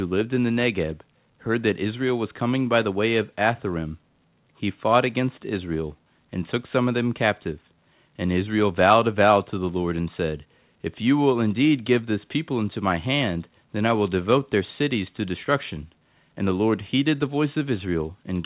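The speech carries no technical faults, and its band ends at about 4 kHz with the fine-grained coding noise of a narrowband call path, which points to a G.711-style codec at 64 kbps.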